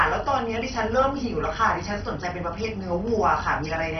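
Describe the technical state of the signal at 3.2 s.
At 3.2 s the speech carries the same damage it has from start to finish: a dull, band-limited sound with nothing above about 6.1 kHz, plus a gurgling, granular roughness. This is likely MP2 compression at a very low bitrate, around 32 kbps. Starved of bits, the codec shuts off the upper sub-bands and quantises the remaining ones coarsely. A plain low-pass filter would only dull the sound. Here the remaining bands also flicker and grind.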